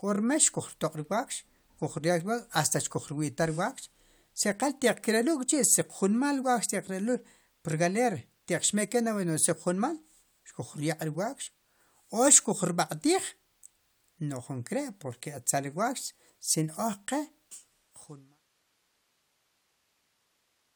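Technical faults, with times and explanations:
Nothing here counts as a fault; the speech simply eases out in a smooth fade that begins around 17 s and is gone by 18.42 s, with no click or hard edge at the end.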